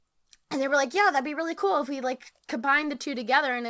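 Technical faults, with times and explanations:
Throughout, clock drift between sender and receiver: the sender's clock runs roughly 3 percent slow, so the receiver's jitter buffer keeps draining and must be refilled. This leaves small, unevenly spaced timing hiccups across the speech, carried over a call path with nothing above 8 kHz, which fits G.722.
0.12 to 3.5 s, repeated timing corrections: the receiver keeps repeating short pieces to stay in step, slowing playback to 97% speed and adding about a tenth of a second overall. Each edit is small.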